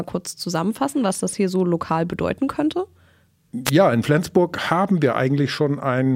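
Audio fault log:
3.65–3.71 s, wireless microphone squelch dropout: for about 57 ms the radio link from the mic weakens, so receiver hiss swells up as the carrier fades. The squelch then slams the output shut, but only for a tiny fraction of a millisecond, so instead of an audible gap there is only a momentary mute before the speech comes back.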